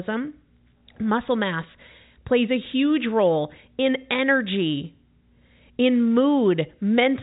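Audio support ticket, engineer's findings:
No faults found in this speech clip. The telephone-band character is consistent with G.711 A-law at 64 kbps, with nothing above about 3.8 kHz and codec damage no more than faint.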